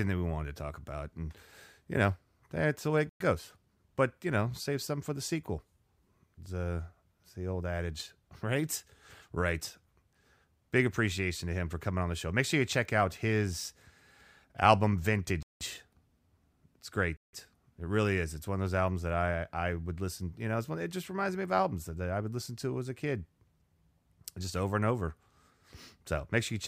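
Three brief dropouts interrupt this speech recording, each cutting abruptly to silence before the sound resumes: at 3.09 s, right after "that's the way it", for 110 ms; at 15.43 s for 182 ms; and at 17.17 s for 166 ms. This pattern is likely a Bluetooth stall, where radio interference delayed packets, the receiving buffer emptied, and playback paused until retransmitted audio arrived.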